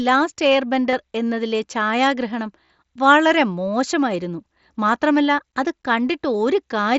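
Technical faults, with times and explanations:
0.91–0.93 s and 2.69 s, concealed Bluetooth headset packet loss: short gaps before "എന്നതിലെ ഛായാഗ്രഹണം വളരെ മോശമായിരുന്നു" and before "വളരെ മോശമായിരുന്നു". The receiver refilled about 20 to 30 ms with copied recent waveform. It sounds like a brief buzzy blip.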